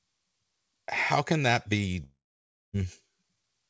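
Just after "how can that be", from 2.04 to 2.75 s, a long network dropout is the likely cause of a gap: the last sound smears into a fading buzz, then about 0.6 s of silence, and speech returns with that stretch missing.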